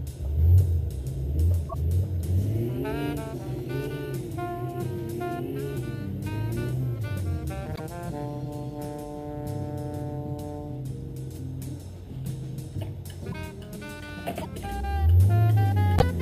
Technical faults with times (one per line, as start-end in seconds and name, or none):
1.69-1.74 broken MP3 bit reservoir
7.75-7.80 broken MP3 bit reservoir
13.31-13.34 broken MP3 bit reservoir
14.41-14.46 broken MP3 bit reservoir
15.98-16.03 broken MP3 bit reservoir